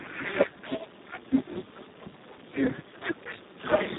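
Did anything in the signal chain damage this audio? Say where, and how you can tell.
Yes: Speex codec damage throughout, at the codec stage. Speech sounds noisy and hoarse with nothing above 3.8 kHz, which fits excitation starved at around 4 kbps.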